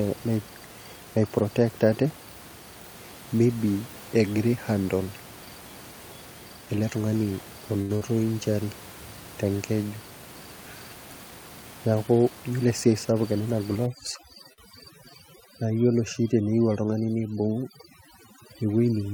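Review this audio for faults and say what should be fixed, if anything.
Short stalls from late packets occur at 7.81–7.92 s and 14.53–14.61 s. The receiver held the last sound for about 81 ms and 49 ms until the packet arrived, so nothing is lost. A deeper jitter buffer would prevent this.

A burst of packet loss at 7.95–8.04 s differs from a stall: after a 53 ms fading fill, the sound resumes about 60 ms further on, with audio missing. Redundancy (FEC) would prevent this.

A jitter buffer speed-up at 12.30–12.93 s trims about 70 ms of pitch periods. Sound runs at 111% with unchanged pitch, unlike resampling, which shifts pitch. Gentler buffer draining would prevent this.

Overdone noise removal from 13.86 s to the end leaves twinkling specks. The room noise, only about 19 dB below speech, needed a lighter setting.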